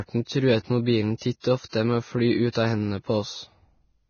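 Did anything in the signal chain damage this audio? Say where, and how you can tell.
Yes. Hissy, grainy speech with nothing above 6.5 kHz throughout points to the codec stage, likely heavy Vorbis compression at a bitrate near 18 kbps.

Just after "å fly", a 50 ms hiss from 2.5 to 2.55 s smears the next attack. This pre-echo is block quantisation noise spreading ahead of the transient.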